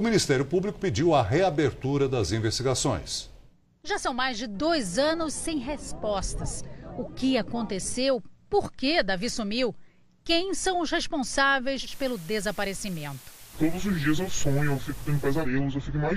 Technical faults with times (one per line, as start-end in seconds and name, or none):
11.82-15.49 digital radio blending to analogue